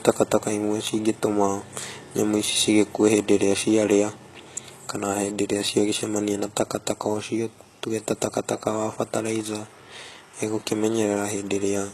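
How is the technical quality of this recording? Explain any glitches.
The recording is compromised by plainly audible codec damage that runs through the entire speech clip; no separate glitches stand out.

HE-AAC compression is the likely cause, and the sound points to a low bitrate of around 16 kbps. The codec encodes only the lower spectrum and synthesises the treble by copying lower bands upward under a coarse envelope, so the upper harmonics do not align with the real ones. The result is a bright but artificial top end, with sibilants gritty or metallic, and nothing at all above 12.3 kHz.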